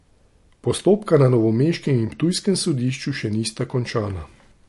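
From start to finish the speech carries plainly audible damage of the kind MP3 compression leaves, most likely from an MP3 encode at a low rate, which fits something near 48 kbps. Nothing survives above 11.3 kHz, so s sounds lose their sparkle, and quieter detail comes and goes in a watery, swirling way with smeared consonant onsets. On a spectrogram this shows as a flat ceiling at 11.3 kHz with patchy, flickering holes beneath it.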